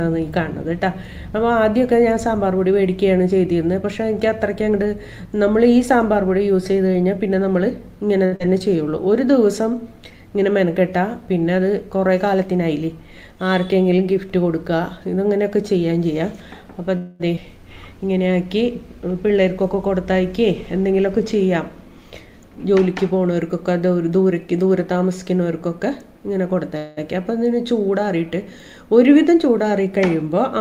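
At 8.25 to 8.34 s comes a short stall from a late packet. The jitter buffer ran dry and the receiver held the last sound for 65 ms until the packet turned up, then resumed from exactly where it stopped. Nothing is lost. The sound is simply drawn out, with a slight buzz or dip. That separates it from the event that follows, where audio really is missing.

Right after, at 8.36 to 8.42 s, is a short concealed packet loss. Here 60 ms of audio never arrived and the receiver patched the hole with 38 ms of extrapolated sound before blending back into the real signal. It comes across as a quick smear or wobble rather than a held tone, and because material is gone, the flow shortens slightly instead of pausing.

From 12.26 to 12.89 s a jitter buffer speed-up runs at 111%, trimming about 70 ms by cutting out tiny pitch-period slices. The pitch stays put while the timing turns hurried. That is how it differs from a skip: there is no single jump, only steady compression.

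At 16.97 to 17.22 s is a call audio freeze. For 224 ms the last sound carries on as a fading buzz or hiss. The likely cause is packets held up in transit, and playback resumes with no content lost. It is longer and more obviously a hang than the brief stall at 8.25 s.

Just after, at 17.36 s, is a skip ahead. About 70 ms of audio is dropped, with only a 10 ms fill, so the two sides butt together almost directly. It sounds like an abrupt jump or clipped fragment, the opposite of the freeze, which inserts time rather than removing it.

A gentler speed-up at 103% spans 19.14 to 23.51 s and removes about 150 ms. Spread over more than four seconds, it is too mild to sound hurried.

A second call audio freeze at 26.77 to 26.99 s holds a decaying buzz or hiss for 198 ms before the audio picks up where it left off.

The last speed-up, at 108% from 29.31 to 30.57 s, removes about 100 ms and audibly hurries the final stretch while the pitch stays unchanged.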